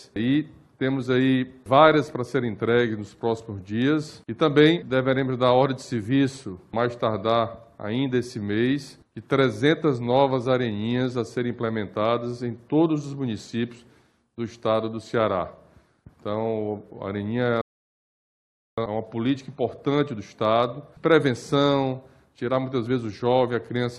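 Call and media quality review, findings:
Rebuffering stall at 17.61–18.78 s: playback drops to silence for about 1.16 s, then resumes exactly where it stopped, with no content skipped. Probable component: client player buffer. Downloaded audio ran out and playback waited for more data, adding time without losing any.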